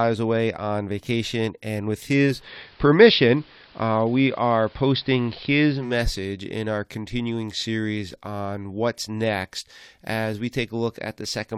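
Digital radio blending to analogue from 2.25 to 5.98 s: the digital signal dropped, so the speech cross-faded over about 260 ms to AM, with faint hiss and about a 2 dB level shift.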